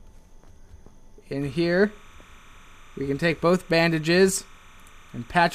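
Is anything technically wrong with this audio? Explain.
Yes. Timecode bleed runs from 1.42 s to the end. Linear timecode from a nearby track or cable has leaked into the audio. Its square wave flips between tones around 1 and 2 kHz at 30 frames per second. It sounds like a steady chirping warble, well below the main sound.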